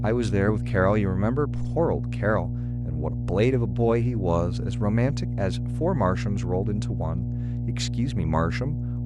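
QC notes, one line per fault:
Throughout: mains hum, a steady low 60 Hz drone with some low harmonics, sitting only slightly below the speech and clearly audible under every phrase. Power-line current is leaking into the signal, which points to a ground loop or nearby transformer.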